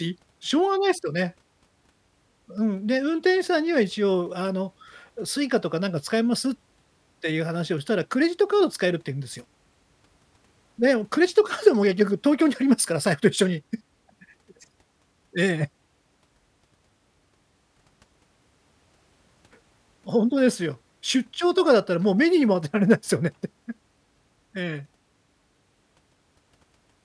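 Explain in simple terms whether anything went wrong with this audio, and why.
Nothing went wrong technically with this speech recording, as the signal stays steady and intact the whole way through.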